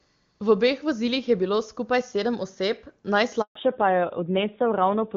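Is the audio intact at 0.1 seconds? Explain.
Yes, the audio is intact at 0.1 seconds, with no fault present at that moment.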